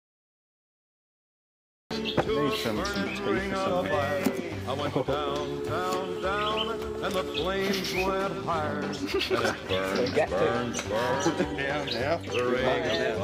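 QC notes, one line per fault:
0.00–1.91 s, cut-off start: digital silence runs until 1.91 s, then the sound begins abruptly mid-event, because capture started late. Unlike a dropout, nothing precedes the silence, and unlike a fade-in, the level jumps straight to full with no ramp or natural attack.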